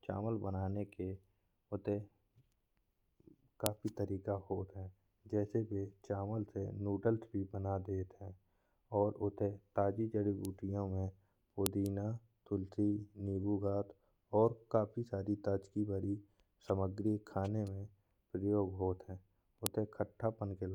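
A sharp, loud click snaps through the speech at 3.66 s, 11.66 s and 19.66 s, exactly 8 s apart. This is a file header played as audio: 8-second WAV pieces were joined without stripping headers, so those bytes play as samples.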